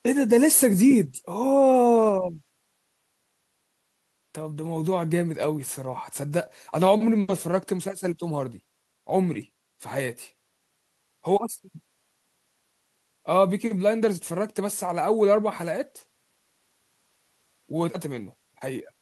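Nothing in this speech recording stands out as a technical problem; there's no point where something goes wrong and you'd want to rewind to check.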